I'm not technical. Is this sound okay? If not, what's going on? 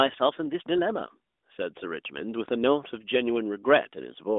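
Yes, this sound is okay; nothing is going wrong in it.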